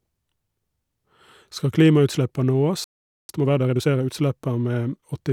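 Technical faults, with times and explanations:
2.84–3.29 s, playback stall: the speech cuts to silence for about 0.45 s mid-flow, then resumes, likely because the player ran short of data or was blocked.
3.29–4.17 s, time-compressed catch-up: the speech runs about 1.5 times fast at unchanged pitch, as small pieces are cut and cross-faded to clear the backlog.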